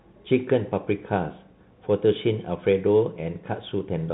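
Throughout, the speech passes through a Bluetooth CVSD headset codec: content above 3.9 kHz is gone, sibilants turn scratchy, and a granular hiss sits under the voice.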